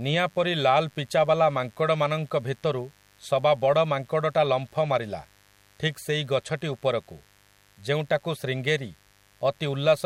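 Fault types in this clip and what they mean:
Mains buzz: A steady, raspy buzz runs under the speech for the whole clip, sitting about 35 dB below it, so it stays quiet but never lets up. It comes from the 50 Hz mains supply getting into the signal path as sharp switching spikes, twice in every cycle. Those spikes make a dense stack of 50 Hz harmonics reaching into the kilohertz range, which gives the buzz its edge rather than a smooth hum.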